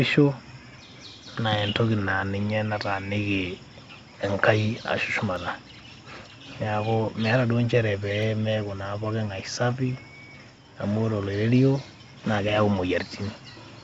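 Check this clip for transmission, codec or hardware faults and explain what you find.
Two sharp clicks stand out, at 5.36 s and 8.23 s. The sound is band-limited to 7 kHz, consistent with a wideband call codec.

Dropped samples are the likely cause of both clicks. A fraction of a millisecond goes missing, so the waveform jumps abruptly. Each jump is heard as one brief, sharp tick.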